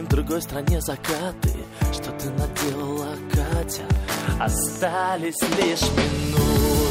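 From 2.64 s to 6.89 s a train of clicks runs over the sound. Something is repeatedly injecting a short pulse into the signal, most likely interference from nearby equipment or a faulty connection or power supply. The pulses arrive at a regular 6.1 per second, around thirty in all, each much the same shape and peaking about 5 dB above the signal. They are heard as steady ticking or popping that carries straight through the quieter passages.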